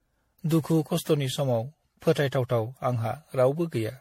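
Throughout the speech, generation loss gives a swirly, hollow, smeared character with blurred consonant attacks, likely from around ten successive MP3 passes near 64 kbit/s. A spectrogram shows nothing above 16.5 kHz, plus flickering spectral holes and smeared onsets in the waveform.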